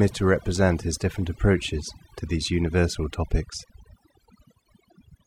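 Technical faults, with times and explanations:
Throughout, overdone noise removal: the speech sits over a near-silent, twinkling background, because an over-strong noise reducer is suppressing quiet frequency bands along with the noise.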